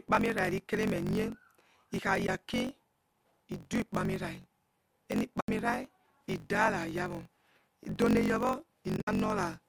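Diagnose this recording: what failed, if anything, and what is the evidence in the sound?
A block size mismatch (truncated) sits at the driver or buffer stage. A steady buzz near 46.9 Hz runs through the whole clip. The speech plays about 1.12 times fast at normal pitch. Each block's tail is discarded, which fits a 1024-sample read buffer.

AAC frame loss with muting happens at the codec stage, probably after network loss. Soft-edged holes appear at 2.26–2.29 s (20 ms lost), at 5.40–5.49 s (90 ms), and at 8.97–9.08 s (100 ms spread over 120 ms, longest run about 70 ms). The decoder zeroed those frames, and its overlapping windows fade the sound out and back in. The stream is likely low-delay AAC.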